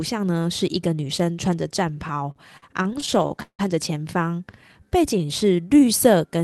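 From 2.07 to 3.61 s the speech stutters through repeated stalls. The receiver kept running out of buffered packets because they arrived late or too slowly, so it held on to the last sound and stretched it, fading it during the longer waits. This happens in short bursts throughout the span, with the longest hold lasting 166 ms, and about a quarter of that stretch is filled in this way. Nothing is skipped. That separates it from packet loss, where sound goes missing. Here the flow catches and drags, then carries on where it left off.

From 4.35 to 6.18 s there is a jitter buffer slow-down. The buffer was building up a reserve, so it repeated single pitch periods and bits of the pauses, adding about 0.22 s in total. Delivery drops to about 88% of normal speed while the pitch stays the same, and the sounds come out drawn out. It runs without stalls throughout, which sets it apart from the stop-start stalls earlier. 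The band limit near 12 kHz and the coding noise from the Opus call path can be heard across the whole clip.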